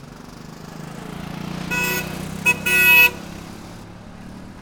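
Pre-emphasis left on, from 1.84 s to 3.84 s: for these two seconds the sound takes on a treble lift that was never undone. It matches the CD 50/15 µs emphasis curve, which boosts high frequencies before storage and expects a matching de-emphasis cut on playback. Without that cut, the top end sits about 8 dB hotter at 10 kHz than at 1 kHz, so the passage turns thin, bright and hissy before settling back.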